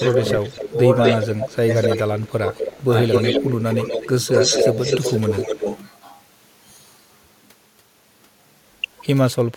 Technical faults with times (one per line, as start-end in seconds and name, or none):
0.00-0.70 echo leak
0.64-0.77 speech suppressed in double talk
1.03-3.95 echo leak
1.67-2.44 speech suppressed in double talk
3.40-4.16 speech suppressed in double talk
4.33-5.56 echo leak
5.28-5.68 speech suppressed in double talk